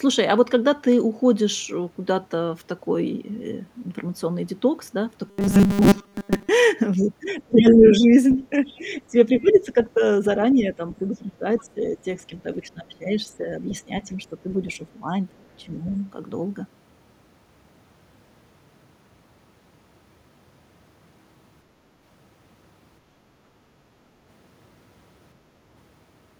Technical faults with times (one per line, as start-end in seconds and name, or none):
5.28-6.49 robotic sound from repeated short buffers
7.30-8.79 other side's voice leaking through
7.34-10.01 speech suppressed in double talk
9.47-9.83 other side's voice leaking through
10.61-15.85 speech suppressed in double talk
11.15-11.64 other side's voice leaking through
13.69-13.73 other side's voice leaking through